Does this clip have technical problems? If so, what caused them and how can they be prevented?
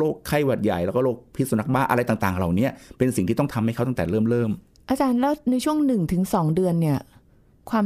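No, nothing stood out as a technical problem on listening to this speech recording.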